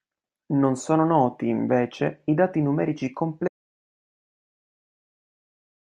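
At 3.48 s, right after "invece i dati numerici", the speech stops dead and never comes back, so you get an audio dropout to silence that runs to the end of the clip. The gap is pure silence, with no room tone or hiss at all. That points to the input being lost while the recorder kept writing, likely a disconnected device or a mute that got hit. Whatever followed in the speech is simply gone.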